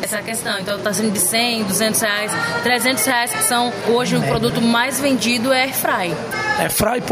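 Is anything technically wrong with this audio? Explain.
No, nothing technically wrong can be heard in this audio. There is no point in the recording where a fault shows itself.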